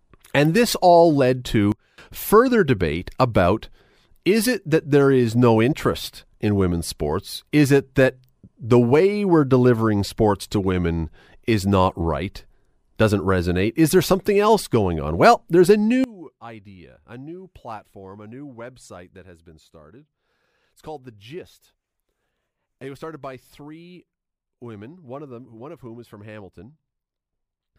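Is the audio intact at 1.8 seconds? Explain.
No. From 1.72 to 1.98 s there is a sudden gain jump: the speech and background noise drop together by about 20 dB in a single step, likely a gain change applied without a ramp. Unlike compressor ducking, there is no gradual attack or release.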